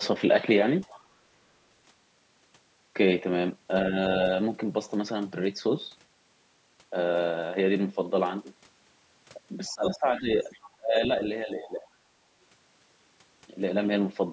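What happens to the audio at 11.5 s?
Speech suppressed in double talk occurs from 11.45 to 11.87 s. The speech level sinks by around 15 dB and parts of it thin out or drop away for roughly 0.4 s. This is likely an echo canceller that treated the talker as loudspeaker echo while both sides spoke.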